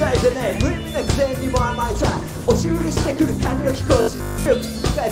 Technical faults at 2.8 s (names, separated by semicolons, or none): adaptive stream at a lower bitrate